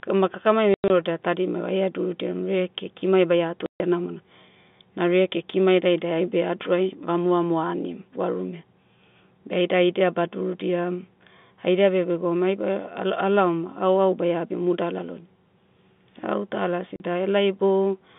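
It's a speech clip over a telephone-band G.711 line, and the trouble is packet loss filled with silence. Chunks of audio simply vanish: about 120 ms scattered over 0.74 to 0.90 s (longest gap 100 ms), 140 ms at 3.66 to 3.80 s, and 40 ms at 16.96 to 17.00 s. The receiver dropped in hard digital silence, so each hole has hard edges. The gap sizes fit 20 ms packets.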